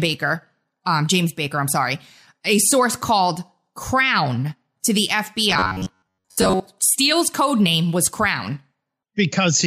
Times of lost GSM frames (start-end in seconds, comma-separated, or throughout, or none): none